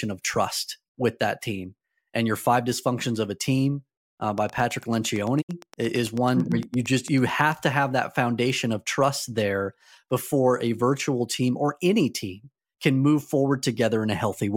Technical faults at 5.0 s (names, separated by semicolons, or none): train of clicks